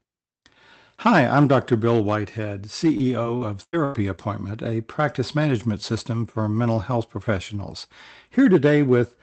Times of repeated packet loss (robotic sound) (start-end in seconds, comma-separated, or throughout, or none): 2.81-4.19